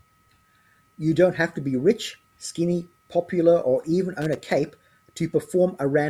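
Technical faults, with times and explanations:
4.21–4.52 s, loose connector crackle: for about 0.3 s a worn or dirty contact repeatedly makes and breaks, chopping the speech into an irregular burst of scratchy crackle. The waveform shows ragged gaps and sharp spikes, and the spectrogram shows scattered, broadband vertical streaks.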